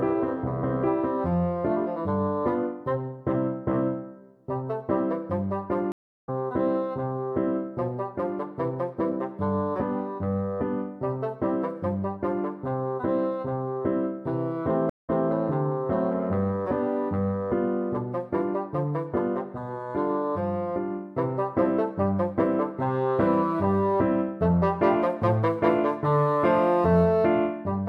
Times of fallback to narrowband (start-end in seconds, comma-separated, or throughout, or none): none